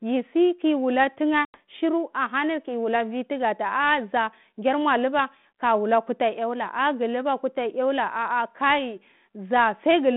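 At 1.45 s, right after "yi saki wula", there's packet loss on the ADPCM call: a hard-edged silent hole of about 90 ms, which points to roughly ten small packets going missing. The decoder's predictor and step size drift from the sender's, so "shiru ahani kiwula vwi" comes back around 1.58 s with some distortion before settling.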